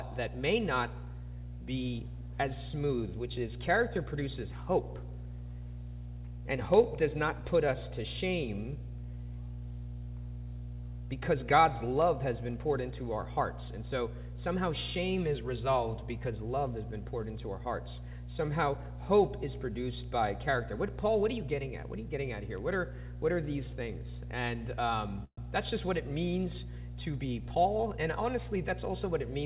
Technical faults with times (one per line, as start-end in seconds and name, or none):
0.00-29.45 mains hum
25.24-25.39 call audio freeze
27.24-28.30 jitter buffer speed-up